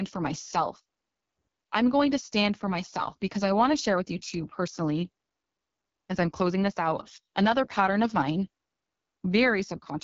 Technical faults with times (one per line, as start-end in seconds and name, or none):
0.00-10.04 AMR wideband (HD Voice) codec